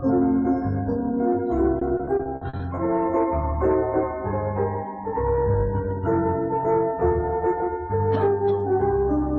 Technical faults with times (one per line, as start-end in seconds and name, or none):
1.79-2.79 repeated packet loss (robotic sound)